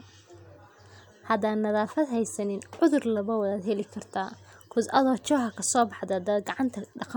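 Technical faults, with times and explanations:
No technical faults can be heard anywhere in this speech recording, and the signal stays steady and intact all the way through.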